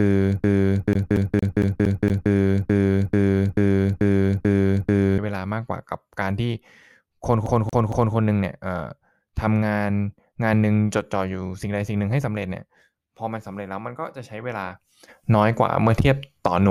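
A broken-record loop runs from the very start to 5.18 s, already under way when the clip begins: the same 0.44 s piece of speech repeats exactly, back to back, eight times. A stalled player or stream likely kept resending its last fragment, so the speech that belonged there is lost. A CD stuck on one turn overlaps it from 0.93 to 2.31 s and returns from 7.46 to 8.15 s. A 0.23 s slice replays six times, then three, each jump marked by a brief mute, giving the quick, even stutter of a laser thrown back at the same spot every revolution.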